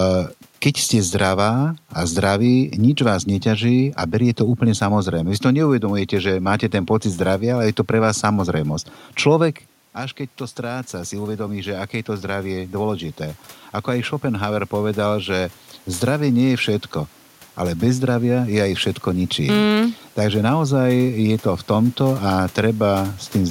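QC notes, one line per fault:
0.15 to 23.41 s, clock slip clicks: faint regular ticks roughly every half second, about fifty in all, each a single sample dropped or repeated. This is likely two devices running on unsynchronised clocks about 50 ppm apart, slipping whenever the drift reaches one sample.
9.97 to 15.6 s, automatic gain rising: after the talker moves back from the microphone near 9.5 s, the input level falls by about 11 dB, and the gain control slowly lifts its gain by about 8 dB, so voice and room noise swell up together.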